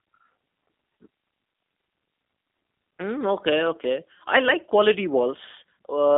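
Throughout, the speech carries G.729 codec damage: a narrow line band near 200 Hz to 3.6 kHz, nothing above 3.7 kHz, and a rough, synthetic rebuilt tone, consistent with 8 kbit/s coding.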